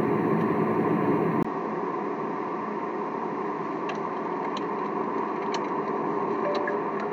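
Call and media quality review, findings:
Likely input switched to a poorer device at 1.43 s: 20 ms gap, then nothing above 7.6 kHz, level about 5 dB lower, new background noise.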